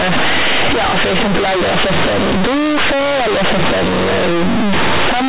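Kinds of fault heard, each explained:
Companded audio read as linear: mu-law bytes play as plain 8-bit samples, giving loud buzzy speech; the waveform is bent out of shape, and spectrogram pauses show dense noise.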